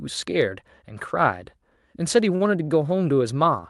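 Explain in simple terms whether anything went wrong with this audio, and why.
Two short stalls from a late packet, at 2.35 to 2.43 s and again at 2.64 to 2.71 s. Each time, a bit of call audio turned up late, so the receiver held the last sound a touch longer (about 50 ms, then 40 ms) before carrying on. Nothing's missing.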